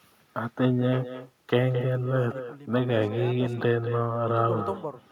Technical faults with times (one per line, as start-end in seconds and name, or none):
0.00-5.12 echo with no canceller